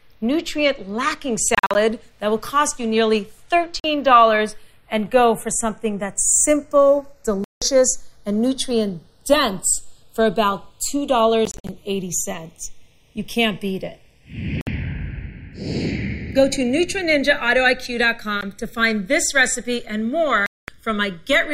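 The audio has slow flanging throughout, from channels drifting apart: two clocks differing by roughly 30 ppm let the inter-channel delay creep toward a millisecond, sweeping mono comb notches. Abrupt silent holes at 1.55–1.75 s (broken up), 3.80–3.84 s, 7.44–7.62 s, 11.45–11.69 s (broken up), 14.61–14.67 s, 18.41 s and 20.46–20.68 s are likely Bluetooth dropout, with playback resuming further along.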